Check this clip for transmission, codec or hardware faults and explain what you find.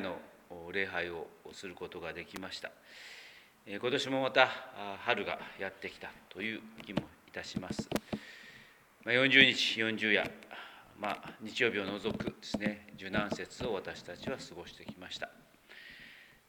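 Two short electrical switching spikes are present, at 2.36 s and 7.96 s. The likely cause is a nearby switch or motor arcing and coupling into the audio line. Each is a sharp snap laid over the sound, peaking around -20 dBFS and -15 dBFS respectively.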